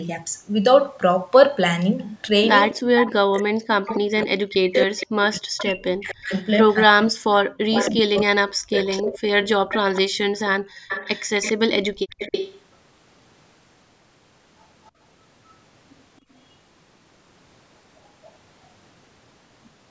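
A speech recording with three linked call faults. An echo leak puts a second copy of the voice 270 ms behind the original from 2.02 to 3.98 s, 4.98 to 6.75 s and 7.71 to 12.61 s, with a faint trace at 14.84 s. The copy is only about 5 dB below the speech in the first and third stretches and about 15 dB below in the second. The likely cause is a far-end echo canceller letting loudspeaker pickup through. The fixed lag separates it from room reverberation. Between 2.82 and 9.08 s the main voice itself dips, by as much as about 40 dB and for roughly 5 s in total, while the echo runs alongside. This is speech suppressed in double talk, likely from the canceller turning down both signals at once. Because the talker's own voice is what sinks, it differs from the background gated by the echo canceller at 10.62 to 10.88 s and 11.94 to 12.09 s. There, only the room sound drops away, by about 36 dB and about 29 dB, for about 300 ms and 150 ms, and then returns.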